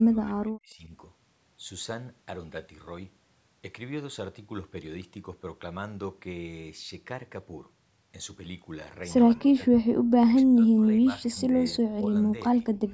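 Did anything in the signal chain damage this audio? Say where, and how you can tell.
Yes, at the call-processing stage. The speech drops in level at 0 to 0.9 s, 9.37 to 9.62 s, 10.25 to 12.15 s and 12.36 to 12.61 s. The drops reach about 30 dB at the start and about 25 dB later, and the last one is shallow. This is likely speech suppressed in double talk: the echo canceller, hearing the far end at the same moment, took the local talker for echo and turned it down in pieces.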